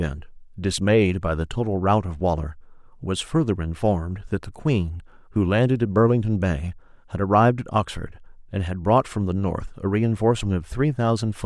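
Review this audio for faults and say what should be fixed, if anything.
No faults turned up in this audio, so nothing needs to be fixed.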